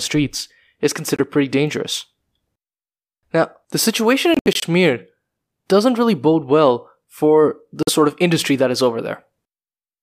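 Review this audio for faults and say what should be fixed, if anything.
Short silent holes break up the speech at 1.16 to 1.20 s, 4.34 to 4.64 s and 7.83 to 7.89 s. These are most likely Bluetooth dropouts, where audio packets reached the headphones too late and were discarded.

The first gap lasts about 23 ms. The third lasts about 46 ms. The middle one is a cluster of gaps totalling about 139 ms spread over roughly 280 ms, and its longest gap is about 70 ms. These lengths point to whole frames of about 23 ms each being lost. After each gap the speech resumes further along, as though it had kept playing. On a waveform each gap shows as a flat line. On a spectrogram it shows as a blank vertical band across all frequencies.

To prevent this, keep the headphones close to the source with no obstructions or 2.4 GHz interference between them, or use a wired connection for critical listening.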